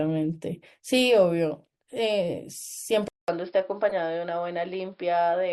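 At 3.08 s the sound goes quiet for about 200 ms, then returns dull and boxy, with nothing above 5.2 kHz and a new, faint noise floor roughly 45 dB down, with no real change in loudness. The likely cause is an input switched to a poorer device. The gap and the changed background tell it apart from a codec simply narrowing its bandwidth.

From 3.89 to 3.92 s a brief glitch peaks around -20 dBFS. This is a corrupt frame decoded: one damaged compressed frame was played, putting energy at the wrong frequencies. Its frame-length smear distinguishes it from a sharp click or a silent dropout.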